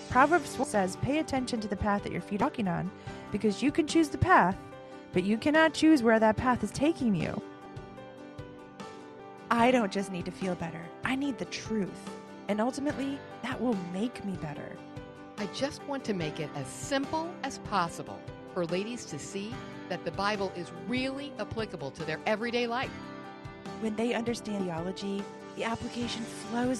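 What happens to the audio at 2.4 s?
A brief glitch between 2.41 and 2.44 s marks a jump forward of roughly 150 ms. This is compressed frames skipped: whole frames never reached the output, consistent with several 20 ms frames being lost. The audio jumps ahead at the join by the length of the missing frames.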